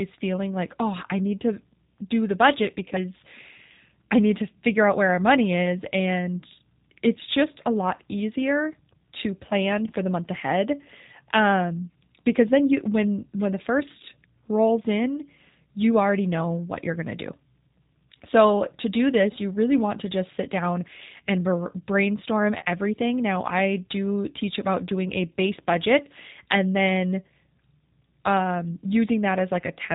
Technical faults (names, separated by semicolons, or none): G.729 codec; VoIP packet loss concealed by the speech codec